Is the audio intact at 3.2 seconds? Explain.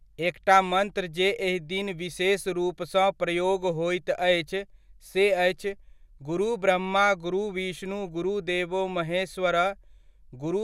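Yes, the audio is intact at 3.2 seconds, with no dropout, click, distortion or other fault heard at that point in the speech.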